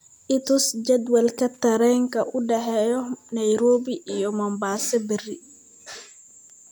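Loose connector crackle appears from 1.54 to 1.62 s, a short irregular burst of scratching lasting about 75 ms. A worn or dirty contact in the signal path was making and breaking intermittently, chopping the speech into rapid fragments for that instant.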